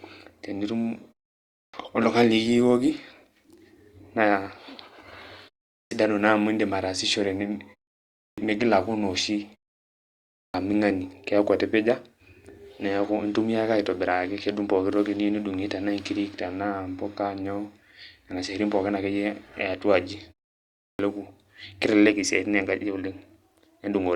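Clipped start after a pause at 1.56, 5.74, 8.19, 10.38 and 20.8 s: each time the speech resumes after a short gap of 0.33 to 0.9 s, the first 160 to 190 ms are missing, so the word bursts in abruptly without its opening sounds. The output device drops into a sleep state during the silence and needs that fraction of a second to wake and lock again, swallowing the onset.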